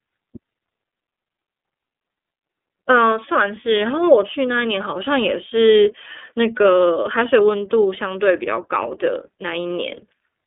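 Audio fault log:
throughout, iLBC codec: the speech sits in a narrow telephone band, about 250 Hz to 3.6 kHz with nothing above 3.8 kHz, and has a plainly audible rough, slightly synthetic edge from each 30 ms frame being coded on its own, which fits the 13.33 kbps mode.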